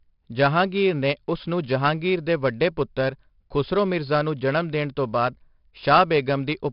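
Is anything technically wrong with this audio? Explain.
Yes. The speech carries 4-bit ADPCM compression throughout. Each sample is coded as a coarse 4-bit step from a predicted value, so the error is a gritty hiss that rises and falls with the speech and turns harsher on sudden onsets, where the adaptive step lags behind. The damage is heavy, and the sound is dull, with nothing above 5.4 kHz, which fits a bitrate around 44 kbps. A spectrogram would show a hard ceiling at 5.4 kHz and a grainy noise haze filling the gaps between harmonics wherever the level is high. A waveform would show small ripples riding on loud passages.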